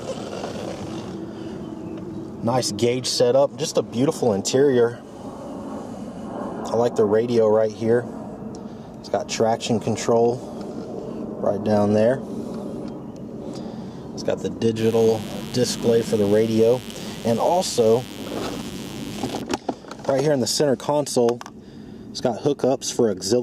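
From 14.79 s to 19.41 s a mains buzz sits under the sound, roughly 20 dB below it. Sharp switching spikes on the 50 Hz supply add harmonics reaching several kHz, so it rasps, unlike a smooth, low mains hum.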